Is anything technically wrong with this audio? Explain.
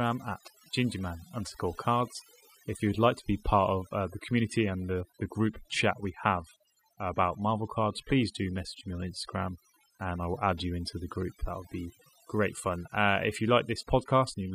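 Yes. Overdone noise removal runs throughout the speech. Noise reduction set far too aggressively pulls individual frequency bands down or out whenever they sit near its noise estimate, taking quieter parts of the voice too, so the background in pauses drops and breaks up into twinkling specks.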